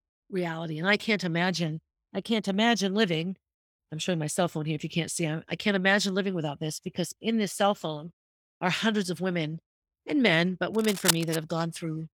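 Right after "women and men but", from 10.74 to 11.36 s, there's cable scratch noise: a dense, uneven scratching burst only about 5 dB below the speech. Likely a worn cable or connector carrying DC got moved, making its contact resistance jump around.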